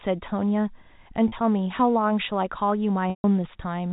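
Speech over a narrowband G.711 telephone path, with two dropouts from packet loss with pitch repetition. At 1.28 to 1.32 s, 40 ms is missing, bridged by repeating the last pitch period, giving a brief held, buzzy tone. At 3.10 to 3.24 s, 140 ms is lost, consistent with a run of 20 ms packets. The repeated period fades out over about 50 ms, leaving silence until speech cross-fades back in.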